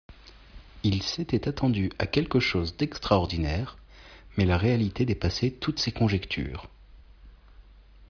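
No audible technical faults here.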